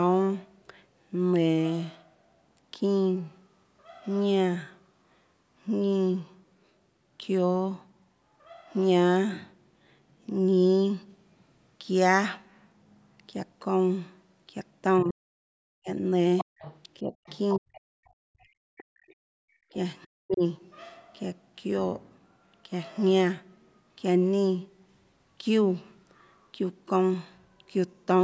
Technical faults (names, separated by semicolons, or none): speech suppressed in double talk; background gated by the echo canceller; other side's voice leaking through